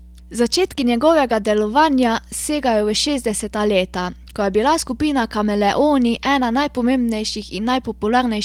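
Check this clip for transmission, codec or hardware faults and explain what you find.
Three faults are audible: mains hum throughout, two spots rebuilt from error-correction data, and one short concealed packet loss.

Mains hum runs through the whole clip. A steady 60 Hz tone sits roughly 20 dB below the speech. This points to a ground loop or a nearby transformer leaking power-line current into the signal path. It is heard as a constant low drone under the speech and in its pauses. On a spectrogram it appears as an unbroken horizontal line at 60 Hz from start to finish. In the waveform, the silent stretches show a regular low ripple instead of a flat line.

Three lost packets were rebuilt from error correction, in two places. The first is at 0.71 s, just before "njegovega delovanja segajo v". The second runs from 4.07 to 4.13 s, just after "segajo v šestdeseta leta". In both places the packet that arrived next carried a low-bitrate backup copy of the missing audio, and the decoder played that copy. 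There is no dropout, but those frames sound rougher and grainier. The first spans 20 ms. The second covers about 40 ms of rebuilt audio, which fits two separate lost packets. On a spectrogram these appear as brief patches where the harmonic detail looks smeared and noisier than the speech around them.

Short concealed packet loss follows from 0.75 to 0.79 s, also just before "njegovega delovanja segajo v". About 20 ms never arrived in time, and no backup copy covered it. The receiver filled roughly 15 ms by extending the preceding sound, then blended back into the real audio. It is heard as a quick smear or wobble. On a spectrogram the preceding sound simply continues for that moment before the crossfade.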